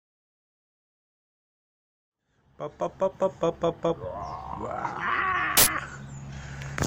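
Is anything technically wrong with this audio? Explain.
Yes. From 5.57 to 5.67 s there is an uninitialised buffer: a block of about 93 ms, which fits a 4096-sample buffer, was played before any audio had been written into it, so leftover memory came out as a brief, very loud burst of harsh digital noise. On a waveform it appears as a sudden high-level slab with hard edges, and on a spectrogram as a bright broadband column. The gentle fade-in ending near 3.5 s is a normal edit.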